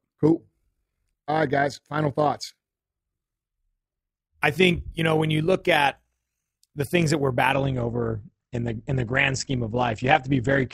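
From the start, the speech carries an overlap-add ripple: frames were rejoined with an overlap that does not sum to constant gain, so level swings by about 6 dB at around 50 Hz, heard as a fast, rough flutter over everything.

At 7.52 s, right after "the things that we're", the adaptive stream drops to a lower bitrate until the end at 10.74 s. The quality changes abruptly, with no gap, and coding artefacts thicken, consistent with a step from roughly 64 to 16 kbit/s Opus.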